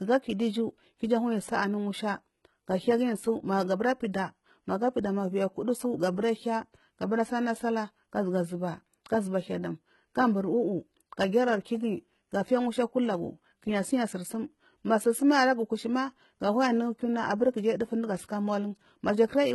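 Speech, with HE-AAC compression heard throughout: the treble sounds bright but synthetic, with s sounds turning gritty and lispy, which points to a low bitrate around 16 kbps. That is likely spectral band replication copying lower bands upward. On a spectrogram, the upper bands show repeated, blocky patches, and nothing appears above 11.8 kHz.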